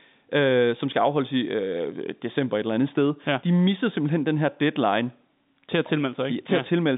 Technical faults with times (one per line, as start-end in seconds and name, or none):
none